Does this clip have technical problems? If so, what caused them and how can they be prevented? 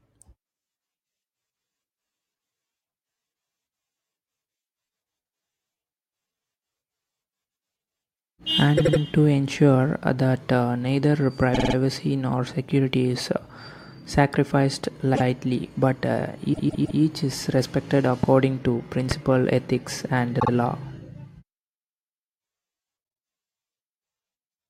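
Yes. Repeated frames cause stutters at 8.77–9.00, 11.53–11.74, 15.14–15.22, 16.52–16.99 and 20.39–20.49 s. Each time, a short compressed block replays, which appears as identical repeating slices on the spectrogram, with a seam at each repeat. Two loud pops, at 18.23–18.26 and 19.11–19.14 s, peak about 10 and 15 dB above the speech. They likely come from a sudden voltage spike from static, a switch or a plug. On the waveform each is a sharp isolated spike, and on the spectrogram a thin full-height vertical line. Both can be prevented by using a reliable encode and transfer path that never resends data, and by keeping connections secure and well grounded while recording.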